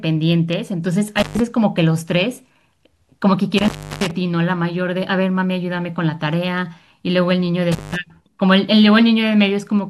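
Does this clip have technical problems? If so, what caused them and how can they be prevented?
Yes. The speech suffers from an intermittent contact: a loose cable or plug briefly loses connection, breaking the signal path three times. Each break cuts the sound out, with crackle where the contact opens and closes and faint hiss left during the gap. The dropouts fall at 1.18 to 1.40 s (open about 128 ms), 3.58 to 4.11 s (the longest, about 329 ms) and 7.72 to 7.96 s (about 177 ms). Seat connectors firmly, replace worn cables, and keep leads strain-relieved so they cannot be tugged mid-recording.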